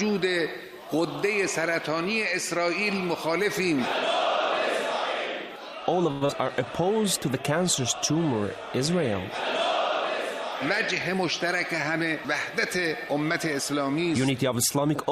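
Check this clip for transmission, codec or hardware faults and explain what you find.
Four transmission faults can be heard. Three cluster between 6.1 and 6.9 seconds, and one comes later.

From 6.11 to 6.23 s there is a call audio freeze. The last sound carries on as a fading buzz or hiss for about 100 ms. It never drops to silence. Then the audio resumes where it left off. The likely cause is delayed packets draining the jitter buffer. The receiver extended the last sound until they arrived. Nothing is lost, but a 100 ms gap now sits in the audio.

At 6.25 to 6.31 s comes short concealed packet loss. About 80 ms of audio never reached the decoder in time. The receiver filled only about 36 ms by continuing the preceding sound, then blended back in. Part of the late stretch was simply skipped, trimming roughly 40 ms of delay. It is heard as a brief smear or wobble, and a short sound may vanish.

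From 6.43 to 6.92 s there is a jitter buffer slow-down. After the hiccup the receiver rebuilt its reserve. It repeated single pitch periods and bits of pause many times over. About 45 ms was added in total. The audio plays at about 92% speed with unchanged pitch. Sounds are drawn out.

From 11.97 to 13.75 s there is a jitter buffer speed-up. Here the buffer held more audio than it wanted, so the receiver cut short pieces of one or a few pitch periods. Roughly 70 ms was removed across the stretch. The audio runs at about 104% speed with the same pitch.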